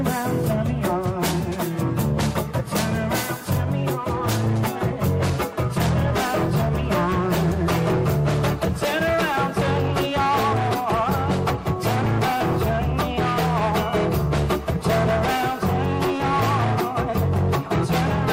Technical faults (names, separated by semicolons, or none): none